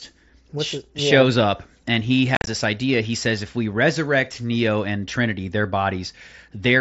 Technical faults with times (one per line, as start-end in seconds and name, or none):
2.35-2.47 unconcealed Bluetooth headset packet loss